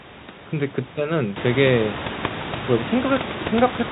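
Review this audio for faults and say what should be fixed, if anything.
Nothing here needs fixing. The room noise steps up by about 13 dB around one and a half seconds and then sits about 12 dB below the speech, and the G.711 telephone coding limits the band to below 4 kHz, as that format always does.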